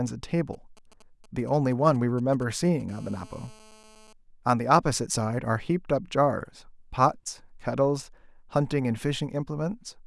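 From 0.53 to 2.91 s you get GSM signalling bursts: a 2G phone close by is handshaking with the network, firing off short clusters of radio bursts, and something in the audio chain is rectifying them into sound. It comes through as that galloping dit-dit-dit, brief 217 Hz buzzes sitting roughly 25 dB under the speech, starting and stopping in irregular groups.

Right after, at 2.91 s, the phone settles into a call and it turns into GSM phone buzz until 4.13 s. Now the transmitter is pulsing continuously at about 217 times a second, so the rectified result is a steady, hard, raspy 217 Hz buzz packed with harmonics, about 28 dB below the speech and with no relation to what's being said.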